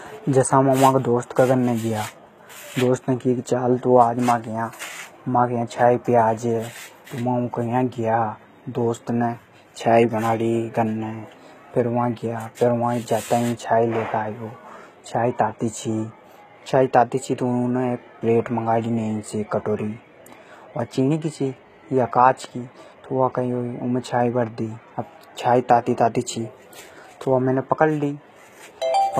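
Throughout, the treble sounds bright but synthetic, with gritty, lispy s sounds and nothing above 19.7 kHz, likely HE-AAC compression rebuilding the highs, consistent with about 20 kbps.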